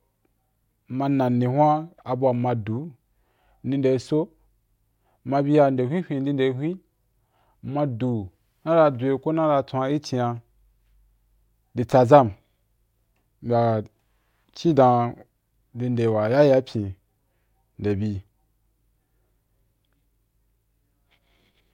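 Nothing in this recording trips the ear as a technical fault, so there's no timeline of problems to walk through.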